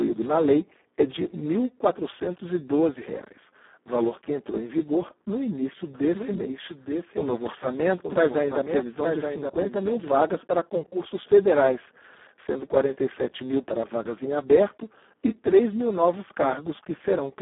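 Throughout the clip the speech has passed through the Speex codec at a very low setting, which fits a bitrate of around 4 kbit/s. At that rate the encoder has almost no bits left to describe the excitation, so the voice comes out hoarse, buzzy and close to robotic, with heavy damage on every syllable. The sound sits in a telephone-like band of roughly 200 Hz to 3.4 kHz, and nothing at all is present above 3.8 kHz.

From 5.95 s to 10.11 s, starting just after "em vigor no início" and ending just before "para concursos federais sendo", a doubled audio track appears, likely from the same audio being captured a second time through a slower path. A full-band copy trails the original by about a second at a somewhat lower level. It lays a dry, undecayed repeat of each phrase over the next one, and it cuts in and out abruptly at both edges.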